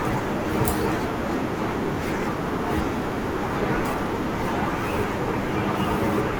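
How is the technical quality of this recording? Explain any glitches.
The recording has one clear glitch, a train of clicks between 2.23 and 4.34 s. Something is injecting short pulses into the signal path, most likely electrical interference from nearby equipment or a faulty connection or power supply. Over those two seconds you hear about four sharp ticks of much the same shape, arriving unevenly at roughly 1.4 per second. They stand well above the level of the speech and cut through the pauses as well as the talking.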